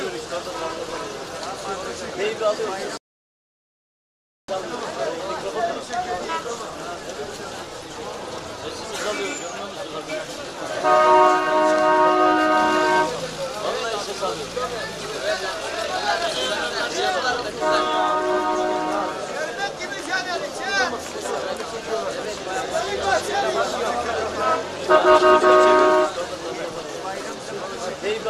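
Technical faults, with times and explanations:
2.97–4.48 s rebuffering stall: playback ran out of downloaded audio, adding 1.51 s of silence before resuming where it stopped; flat waveform gap, blank spectrogram column.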